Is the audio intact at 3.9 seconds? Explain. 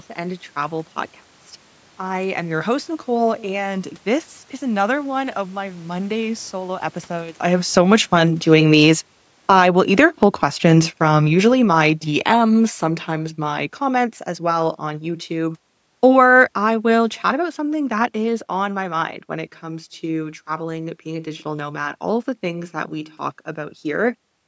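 Yes, the audio is intact at 3.9 seconds, with no technical fault at that moment.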